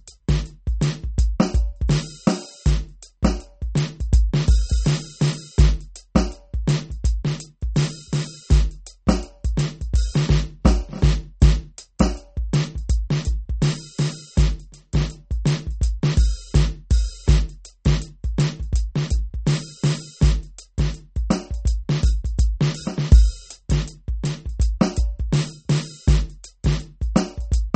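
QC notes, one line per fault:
Throughout, MP3 compression is likely: the music stops dead above 8.4 kHz, and weak spectral detail flickers frame to frame, giving a plainly audible watery swirl and smeared attacks, which fits a starved MP3 encoder running around 33 kbps.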